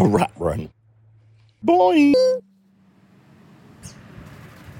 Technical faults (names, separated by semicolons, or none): section at the wrong speed